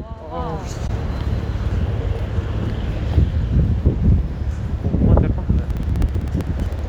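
At 0.87 to 0.90 s, a damaged AAC frame was caught and concealed by the decoder, consistent with a single lost frame. From 5.70 to 6.79 s, periodic USB or driver dropouts replace roughly 2 ms of audio with silence every 64 ms, producing a steady run of small ticks.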